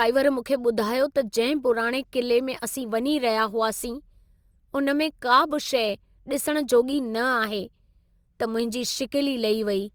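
Throughout, sample clock jitter of about 1.5 microseconds makes the converter sample slightly off time, adding a hiss roughly 35 dB below the speech that thickens on loud, bright sounds.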